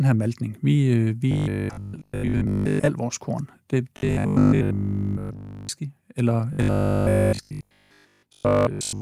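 Audio likely arrived too slowly, so the playback repeated a short buffer of about 20 ms to fill the gaps, giving robotic sound from repeated short buffers at 1.32–2.90 s, 3.97–5.69 s and 6.53 s to the end. The repetition imposes a 50 Hz buzz, a flat, metallic drone that roughly tracks the words. In the first and last spans most of the audio is repeated, and in the middle span all of it.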